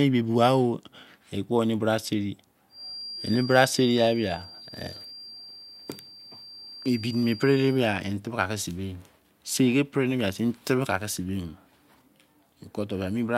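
Speech clip. Just after "ekpo eni bra seri", a feedback whistle runs from 2.68 to 7.85 s. It is a thin, steady tone at 4.7 kHz, about 20 dB below the speech, swelling and fading slowly in level. The likely cause is a loudspeaker-to-microphone loop sitting right at the edge of feedback.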